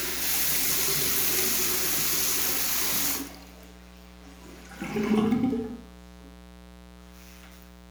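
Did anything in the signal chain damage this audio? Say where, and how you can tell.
Yes. The damage happened in the analogue wiring: there's a mains buzz running under the sound for the whole clip, sitting roughly 20 dB below it. It's a raspy, edgy buzz rather than a smooth hum, built on 60 Hz with a ladder of harmonics climbing into the kilohertz range. That points to something like a dimmer, a rectifier or a poorly shielded cable injecting sharp switching spikes twice per mains cycle before conversion.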